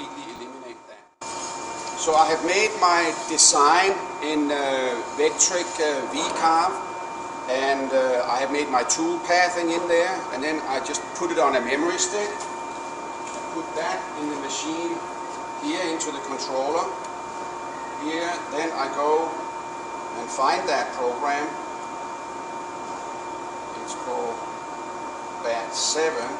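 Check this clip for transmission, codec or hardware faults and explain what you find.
One fault is present: chunks out of order at 0.36 to 0.38 s. A 10 ms chunk arrived one chunk late and plays after the chunk that should follow it. Nothing is lost, but the swapped order creates three hard joins, heard as a brief jumbled flicker.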